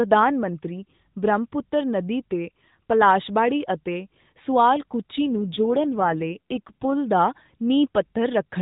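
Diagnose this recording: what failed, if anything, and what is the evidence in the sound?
AMR rate drop, from 5.18 s to 6.94 s, at the codec stage under network control. Over that stretch the speech turns rougher and more synthetic while the band stays narrowband, with nothing above 4 kHz as before, and there is no gap or dropout. That fits the link forcing the AMR-NB encoder down from about 12.2 kbps to about 5.9 kbps, leaving fewer pulses per frame to model the voice until the rate recovers.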